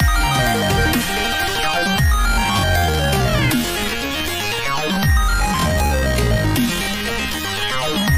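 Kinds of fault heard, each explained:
Time-stretched section: from 1.64 s to the end, the pace abruptly drops to 0.61 times normal speed while pitch holds steady, so the audio drags. This is likely software lengthening by repeating short pieces, unlike a plain slowdown, which would also lower pitch.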